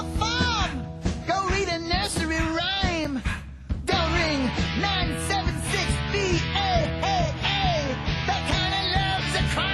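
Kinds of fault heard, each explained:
Block of digital silence: Two 5.33 ms drops to silence, at 3.05 s and 8.51 s, fit an unfilled 256-sample buffer. Each is heard as a tick.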